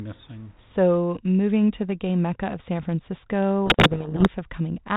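Telephone-band speech, consistent with 32 kbit/s G.726 and its light coding noise, shows a codec payload misread from 3.66 to 4.28 s. Reversed bit order in the G.726 code words buries the speech under harsh distortion until the packing matches again.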